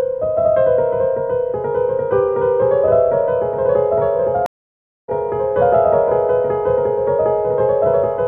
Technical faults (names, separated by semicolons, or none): stream reconnect